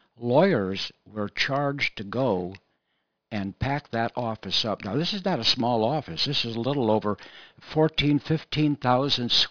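Aliasing runs through the whole speech clip. The sample rate appears to have been cut, from something like 44.1 kHz down to around 11 kHz, with no low-pass filter first, so energy above 5.5 kHz folds back below it as false, unrelated tones, roughly 15 dB under the speech. Sibilants sound gritty and metallic. A spectrogram shows mirrored, inverted bands crowding up hard against a 5.5 kHz ceiling.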